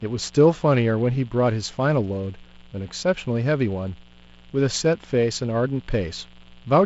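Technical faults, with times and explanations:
Throughout: mains buzz, a steady raspy buzz well below the speech on a 60 Hz fundamental. Switching spikes twice per mains cycle spread harmonics into the kilohertz range, so it rasps rather than humming smoothly. The wideband telephone path, open up to 7.7 kHz, keeps those harmonics.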